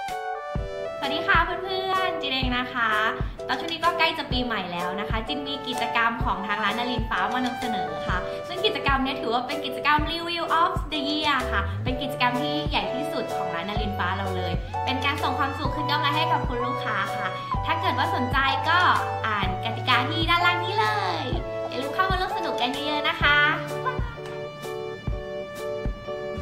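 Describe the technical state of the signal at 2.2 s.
At 2.2 s the signal is intact, with no audible fault at that point.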